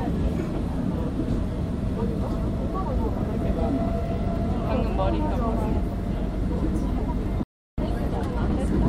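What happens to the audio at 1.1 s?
Nothing goes wrong at 1.1 s; the sound runs on intact through that moment, with no dropout, click, distortion or other fault.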